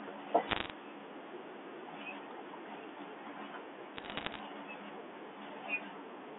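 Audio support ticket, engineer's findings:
Bit errors on a digital phone line, 0.48–0.70 s: dense sharp ticks over intact speech, error rate around one bit in a hundred. Flipped sign/high bits in the G.711 mu-law stream, each corrupting one sample. 3.94–4.40 s: same crackle, sparser, roughly half that rate. Unlike packet loss, there are no gaps, repeats or muting. Each tick is a lone sample spike, and the speech underneath stays continuous. Band-limiting to 300 Hz–3.5 kHz is expected for this line.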